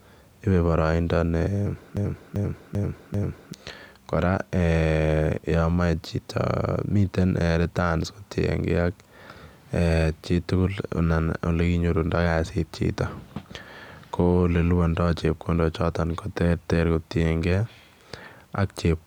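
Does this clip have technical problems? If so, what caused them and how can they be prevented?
Yes. From 1.97 to 3.53 s, a broken-record loop repeats one 0.39 s fragment four times, likely a stalled stream resending its buffer, visible as identical tiled spectrogram blocks. Preventing it takes stall detection that mutes output or resynchronises the stream rather than replaying held data.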